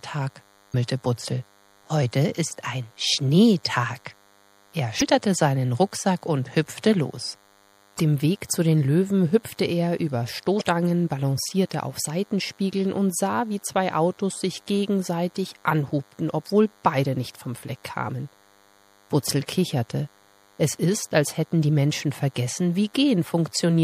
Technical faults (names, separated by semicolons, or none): DECT cordless phone buzz; MP3 compression; damaged data in a compressed stream